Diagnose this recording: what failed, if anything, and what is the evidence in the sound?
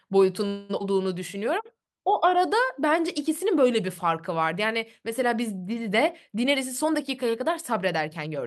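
At 0.47 to 0.71 s the speech stops and the last sound carries on as a fading buzz or hiss for about 0.22 s, then resumes exactly where it left off with nothing missing. This call audio freeze is likely a network stall that let the jitter buffer run empty while the receiver stretched its final frame. A dropout would lose material; here the pause is inserted and the audio simply arrives later.

Just after, at 0.79 to 0.82 s, a skip ahead jumps forward with almost no gap, only a few milliseconds of fill, and around 150 ms of speech gone. The sides of the cut butt together directly. That points to network loss or the jitter buffer discarding audio once later packets were already queued. Unlike the freeze, time is removed rather than added, which claws back most of the delay the stall introduced.

From 1.35 to 2.90 s the speech plays at about 92% speed with unchanged pitch, sounds drawn out, and gains 137 ms in total. 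That is a jitter buffer slow-down: the receiver repeated single pitch periods and bits of pauses many times to rebuild its reserve. A tape or clock slip would drag the pitch down along with the tempo. Here the pitch holds steady, which marks this as buffer time-stretching.

From 6.44 to 8.38 s the speech runs at about 107% speed, again at steady pitch, and sounds hurried, with roughly 150 ms trimmed away. This jitter buffer speed-up comes from the receiver cutting short stretches of one or a few pitch periods, many times in succession, to drain an oversized buffer. A skip ahead removes one block all at once. This shortening is spread thinly across nearly two seconds, so nothing audibly jumps.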